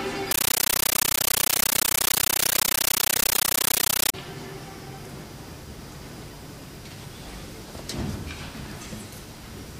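From 0.31 s to 4.14 s, the sound is replaced by loud, harsh, chattering static. This is a compressed stream played as audio. An AC-3 bitstream has been passed along as if it were ordinary samples, and nothing decoded it. Each data frame becomes a 13.3 ms burst of noise, then silence from the padding. The bursts repeat 31.25 times a second, which gives the rapid chatter. The density fits a 640 kbps stream.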